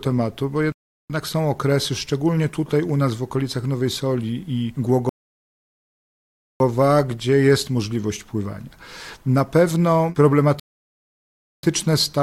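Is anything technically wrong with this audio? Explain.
Yes: the audio has three rebuffering stalls, at 0.72 to 1.10 s, 5.09 to 6.60 s and 10.60 to 11.63 s. Each time, playback runs out of downloaded data and halts until more arrives, adding about 0.38 s, 1.51 s and 1.04 s of silence. The sound then picks up exactly where it stopped. That sets it apart from a packet dropout, where material is skipped and the timeline stays the same length.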